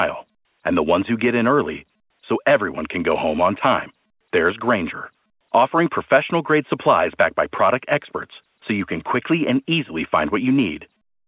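No technical faults can be heard anywhere in the speech. The audio comes through G.711 A-law telephone coding, which cuts everything above 4 kHz and leaves a faint noise that rises and falls with the level of the speech, as telephone audio sampled at 8 kHz normally does.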